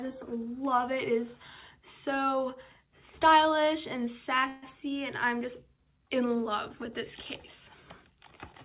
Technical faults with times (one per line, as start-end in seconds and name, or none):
4.48-4.64 call audio freeze